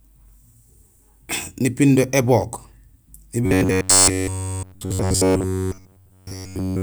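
It's a speech clip, and from about 3.46 s right through to 6.83 s the voice collapses into robotic sound from repeated short buffers. It turns into a stiff, metallic buzz locked at about 93.8 Hz that only loosely tracks the words, and essentially all of that stretch is affected. The likely cause is audio arriving too rarely, so the playback side keeps looping a tiny chunk, roughly 10.7 ms given that buzz frequency, and skipping the real signal.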